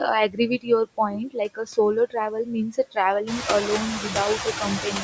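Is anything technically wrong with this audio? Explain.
Yes. Noise suppressor artifacts run through the whole clip. The suppressor pulls down, frame by frame, any band it judges to be steady noise, by about 21 dB. The background dips between phrases and swells under them. A spectrogram shows a patchy, speckled noise floor up to the 8 kHz ceiling of the call microphone path.

Speech cut by the noise suppressor occurs from 0.28 to 1.78 s, 1.94 to 2.97 s, 3.23 to 3.46 s, 3.62 to 4.16 s and 4.36 s to the end. In these spans the suppressor mistakes quiet speech for noise and turns it down. The drops reach about 21 dB in the first span, about 18 dB in the second, about 11 dB in the third and about 13 to 14 dB after the room noise rises by about 13 dB near 3.5 s. Consonants and word endings sound swallowed. On the waveform the syllable tails collapse abruptly, and the spectrogram shows missing high-frequency consonant energy.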